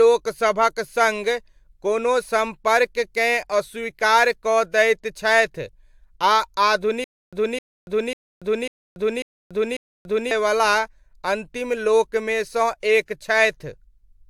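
The whole clip has a swirly, hollow smear with soft attacks, the likely result of generation loss from about three passes through an AAC-type codec. From 7.04 to 10.31 s there's a stutter with silent gaps: a 260 ms burst repeats six times, each followed by 285 ms of dead silence, likely a stalled stream replaying its last fragment.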